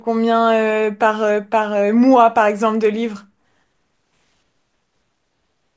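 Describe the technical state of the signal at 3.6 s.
At 3.6 s the resampler is restarted on every block, from 2.4 s to the end: each 50 ms block is converted without its neighbours, leaving edge errors heard as a 20 Hz ticking buzz under the speech.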